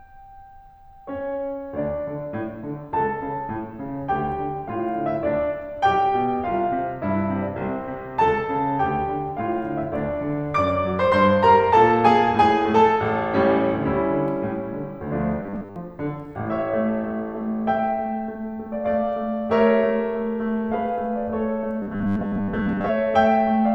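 At 15.43 to 15.76 s and 21.82 to 22.89 s, the music becomes a rigid 100 Hz buzz. This robotic sound likely comes from a repeated 10 ms buffer replacing most of the audio.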